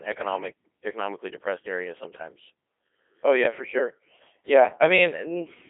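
Speech passed through a Codec 2 vocoder throughout. The voice is resynthesised from sine waves, so it sounds robotic and buzzy. Nothing remains above 3.8 kHz. The heavy damage fits a rate near 2.4 kbit/s.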